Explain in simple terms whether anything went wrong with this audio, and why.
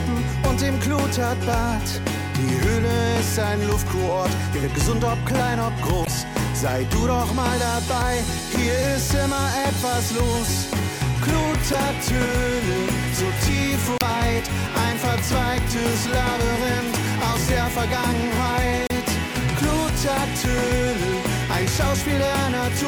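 Something went wrong four times: there is damaged data in the compressed stream. Parts of the compressed file were corrupted, so the decoder couldn't read those frames properly, lost its place, and had to hunt for the next good frame before carrying on. Each time, you hear a short chirp or blip of about five hundredths of a second, at 6.02–6.08 s, 11.70–11.75 s, 13.98–14.03 s and 18.87–18.91 s.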